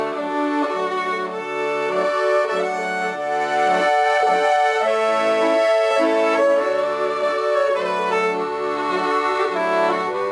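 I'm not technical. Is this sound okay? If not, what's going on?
Yes, nothing wrong here.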